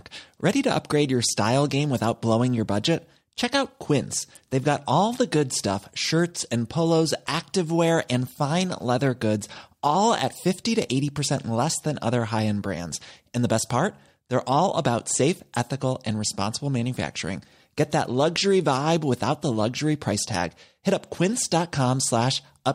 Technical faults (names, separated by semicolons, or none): none